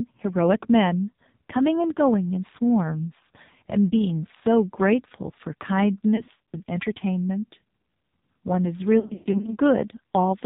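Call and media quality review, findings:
AMR narrowband mobile codec, whole clip. Speech band-limited, nothing above 4 kHz. Buzzy, synthetic voicing, heavy codec damage. Sound fits a low AMR-NB mode near 5.9 kbps: sparse pulse excitation per subframe, vocal tract model starved of bits.

Lost AMR speech frames, 6.16 to 6.57 s and 9.00 to 9.56 s. Brief dips and warbling, then smeared, fading sound. About 180 ms of gaps across 360 ms, longest 60 ms. Then about 260 ms across 440 ms, longest 120 ms, fading toward silence. Decoder concealment repeats the last pitch and vocal tract settings with falling gain.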